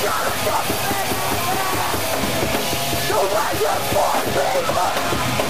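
The audio carries a buzzy distortion from start to finish, with noise filling even the quiet gaps, which points likely to a stuck bit. A step of about -20 dBFS flips with the waveform's sign, so unlike clipping it doesn't depend on loudness.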